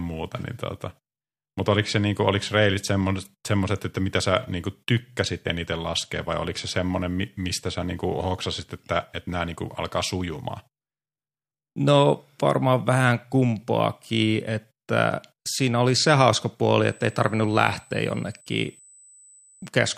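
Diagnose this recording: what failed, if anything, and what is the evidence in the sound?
USB whine appears in the analogue wiring, through power or ground. Right after "oli se hauska puoli", from 16.88 s to 19.68 s, a steady tone sits at 8 kHz. It is roughly 30 dB below the speech, faint. Its pitch never moves. That fixed 8 kHz matches the 125 microsecond microframe rate of a USB bus. The bus draws current in bursts at that rate, and the ripple leaks into the audio path.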